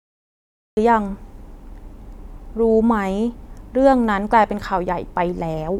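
The recording or stream began late, a cut-off start in this speech clip: the first 0.77 s are digital silence, and then at 0.77 s the talking appears abruptly mid-sound, with no natural attack or fade-in, as though the opening had been sliced away.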